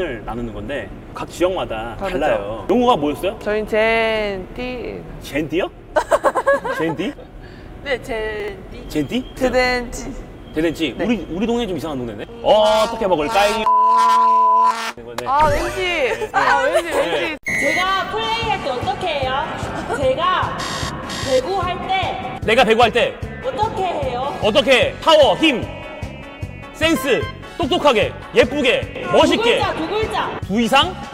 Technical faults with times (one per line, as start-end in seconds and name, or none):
8.40-8.48 chunks out of order